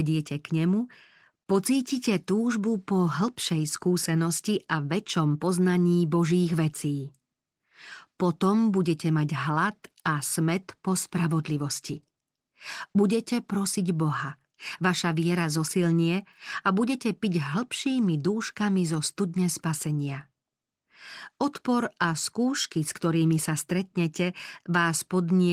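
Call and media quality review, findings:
No faults found in the speech. Opus voice compression leaves only light coding texture across the full band, consistent with hybrid mode at around 20 kbps.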